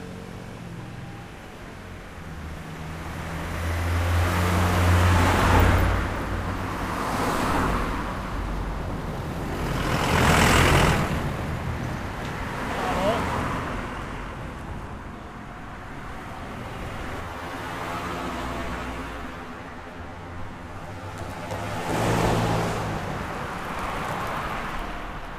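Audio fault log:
17.21–21.94 s, channel delay (comb filtering): one channel lags the other by around 10 ms, and summing them to mono cancels shared content at evenly spaced frequencies starting near 40 Hz, cutting fixed notches that make the audio hollow and phasey.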